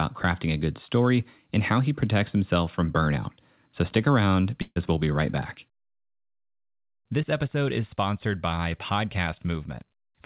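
Speech with a burst of packet loss from 4.62 to 4.78 s, between "stick around" and "we'll be right back". About 140 ms of audio never arrived. The receiver filled roughly 138 ms by extending the last sound and fading it, with about 30 ms of silence, before the stream resumes past the missing stretch. The band stops at 4 kHz, consistent with a G.711 A-law call path at 64 kbps.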